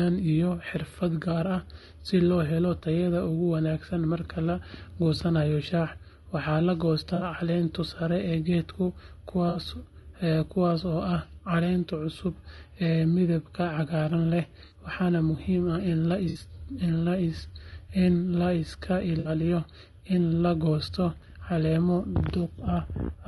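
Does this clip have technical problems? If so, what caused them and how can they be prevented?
Yes. Throughout the speech there is a rough, grainy texture, with noise filling the gaps between harmonics and a synthetic-sounding top band. This is likely low-delay AAC compression (AAC-ELD) at a low bitrate, roughly 32 kbps, whose short frames resolve pitch poorly. Raising the bitrate or using a longer-frame codec prevents it.

Five short smeared, noisy patches of about 60 ms each, which fits three lost frames, are AAC frame loss with concealment. They occur at 7.15 s (after "goosanayo shaaha waxaa la"), 9.49 s, 14.65 s (before "waxaana muhiim ah"), 16.29 s and 19.19 s. The decoder fills each gap from the last good spectrum. Forward error correction or a more reliable network path prevents it.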